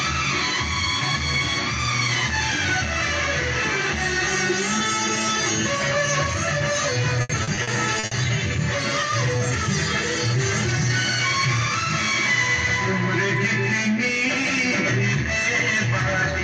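Repeated packet loss between 7.21 and 8.13 s left gaps up to 80 ms, patched by extending prior sound, concealing about 30% of that stretch and making it choppy and robotic.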